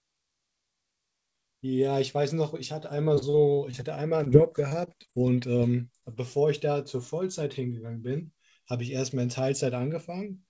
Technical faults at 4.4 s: repeated packet loss (robotic sound)

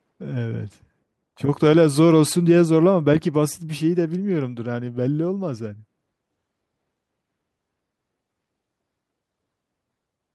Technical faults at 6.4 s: none

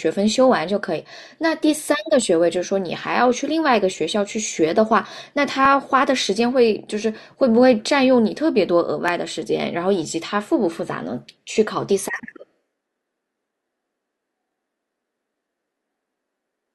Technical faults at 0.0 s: none

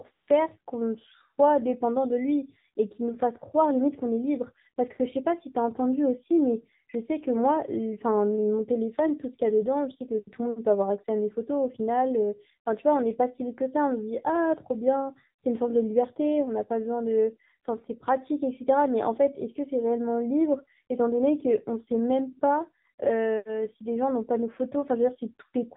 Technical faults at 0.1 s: AMR narrowband mobile codec; AMR comfort noise

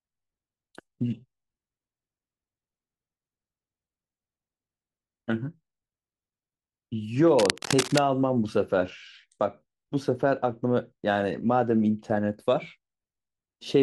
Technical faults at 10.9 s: none

